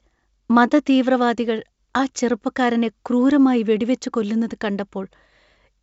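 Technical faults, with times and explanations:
No technical faults can be heard in the speech. The audio carries the character of a WebRTC call path working normally, with nothing above 8 kHz, a band limit that fits a G.722 wideband codec.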